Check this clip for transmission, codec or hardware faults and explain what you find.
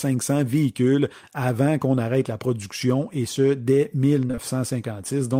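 There's one fault here, short concealed packet loss, hitting three times back to back right after "production et ce dès": 4.27 to 4.31 s, 4.31 to 4.35 s and 4.35 to 4.39 s. Each time about 20 ms of the speech never got to the decoder, so it papered over the gap by extending the last bit of sound, roughly 16 to 23 ms each, then crossfaded back. Chained together, you get a short smeared, wobbly patch there.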